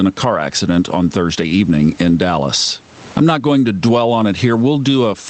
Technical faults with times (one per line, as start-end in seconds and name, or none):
0.00-5.29 gain pumping